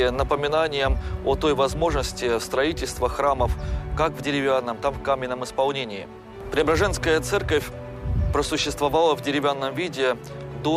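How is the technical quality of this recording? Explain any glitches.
No technical faults are audible.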